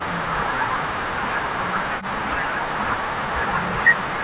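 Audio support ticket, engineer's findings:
Speech suppressed in double talk, 0.00–1.03 s, 1.50–1.82 s, and 2.01 s to the end. The speech level collapses by about 30 to 35 dB in each stretch and returns only briefly in the gaps. Likely cause: the echo canceller's suppressor misclassifying simultaneous near-end and far-end talk as echo, then attenuating the whole near-end signal. Band-limited to 4 kHz throughout, consistent with a G.711 narrowband call path.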